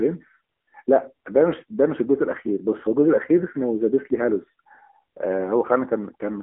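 Throughout the speech, the AMR narrowband mobile codec squeezes everything into a telephone band of about 250 Hz to 3.4 kHz, so a spectrogram shows a hard ceiling with nothing above 3.7 kHz. Its pulse-excited vocal-tract model leaves a plainly buzzy, synthetic edge, which fits a mode near 7.95 kbps.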